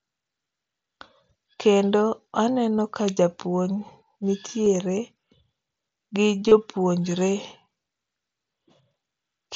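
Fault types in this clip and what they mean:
Concealed Bluetooth headset packet loss: voice packets from the headset failed to arrive, and the receiver filled each gap by repeating the closest-matching piece of the preceding waveform. Short losses at 2.78 s and 4.65 s are roughly one and two short packets' worth, and the single one at 2.78 s is barely noticeable. The longer gap from 6.48 to 6.52 s, about 30 ms, leaves a brief buzzy hold at full level with a slight warble as real audio resumes over the mSBC wideband link.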